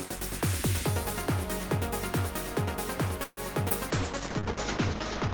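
At 3.23 s a call audio freeze, likely from delayed packets draining the jitter buffer, fills about 137 ms with a fading buzz before the sound resumes at 3.40 s. At 3.69 s a stretch of around 70 ms is dropped in a skip ahead, so playback jumps forward with almost no gap. From 3.91 s to the end, a call bitrate drop cuts the encoder from 32 to 8 kbps and the bandwidth from 20 kHz to 8 kHz, leaving the audio coarse and muffled.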